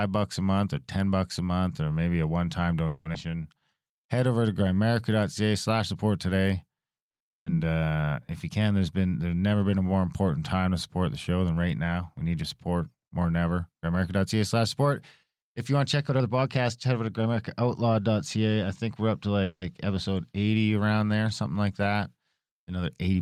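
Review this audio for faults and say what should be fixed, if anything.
Call audio freeze, 2.87 to 3.07 s and 19.44 to 19.73 s: in both places the sound stalls for about 180 ms and then carries on from where it stopped, with nothing lost. The first stall is filled by a continuation of the last sound. The second ends in about 40 ms of silence before playback resumes. This is likely packets held up in transit, draining the jitter buffer so the receiver had to bridge the wait. Prevention: give the jitter buffer more headroom and prioritise call traffic (QoS) on congested links.

Skip ahead, 3.13 to 3.16 s: playback jumps forward, dropping roughly 100 ms of audio behind a bridge of only about 10 ms. It comes just after the first freeze. The extra delay built up there was apparently shed by discarding queued audio, so the two sides of the jump are joined almost directly. Prevention: have the jitter buffer recover backlog through gradual time compression instead of discarding whole packets.

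Jitter buffer slow-down, 3.31 to 4.33 s and 7.73 to 8.10 s: the audio is stretched without a change in pitch. The first stretch adds 120 ms and runs at 89% speed. The second adds 90 ms at 78%, which draws sounds out noticeably. In both cases the receiver was rebuilding its reserve by repeating short pitch periods or pause fragments many times in a row. Prevention: stabilise network jitter so the buffer rarely runs low and must refill.

Burst of packet loss, 7.36 to 7.48 s: packets were lost or arrived too late, leaving a 100 ms gap. That gap is heard as silence rather than a sustained buzz. Playback then resumes about 180 ms further on, so more audio is missing than the gap itself lasts, and the timeline shortens by 80 ms. Prevention: enable forward error correction or redundancy (for example, in-band FEC) and address the loss on the path.

Jitter buffer speed-up, 11.91 to 17.61 s: over nearly six seconds the audio runs at 106% with unchanged pitch, which gives it a hurried feel. 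In total roughly a third of a second is removed in many small cuts of one or a few pitch periods each. The buffer was holding more audio than its target and trimmed the excess delay this way. Prevention: smooth packet delivery so delayed packets don't arrive in bunches that overfill the buffer.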